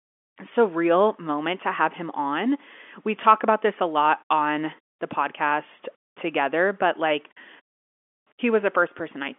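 No technical faults are audible in this speech recording, which carries the narrow 250 Hz to 3.4 kHz band of G.711 telephone coding with nothing above 3.7 kHz, the expected character of a phone line rather than a defect.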